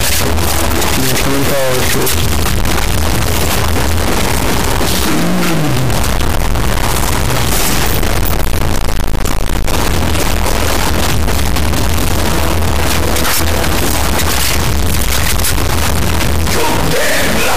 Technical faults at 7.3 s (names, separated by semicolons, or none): integer read as float